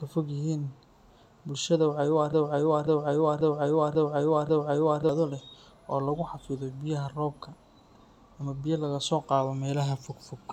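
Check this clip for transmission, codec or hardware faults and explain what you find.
One fault stands out: a broken-record loop from 2.33 to 5.09 s. A 0.54 s fragment of speech repeats exactly, five times back to back. The likely cause is a stalled player or stream replaying its last held chunk. The real audio there is lost. Normal speech resumes at "leh oo lagu".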